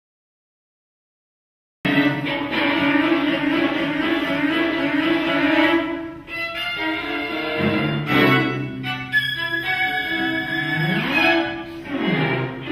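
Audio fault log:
0.00–1.85 s, cut-off start: digital silence runs until 1.85 s, where the sound begins abruptly partway through, with no natural attack or fade-in. Capture started late, so the onset of what was already sounding was never recorded and the waveform jumps straight in.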